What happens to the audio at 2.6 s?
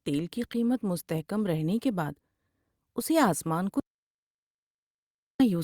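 Nothing goes wrong at 2.6 s; the speech runs through that moment intact, with no dropout, click, glitch or other fault.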